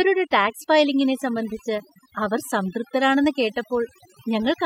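Overdone noise removal runs through the whole speech clip. A noise reduction stage was pushed too hard on a noisy take. It pulls individual frequency bands down or off whenever they sit near its noise estimate. Quiet parts of the voice fall below that line and vanish too. The background drops and breaks up into twinkling specks.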